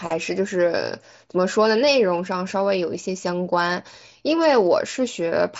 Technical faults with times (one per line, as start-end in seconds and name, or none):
none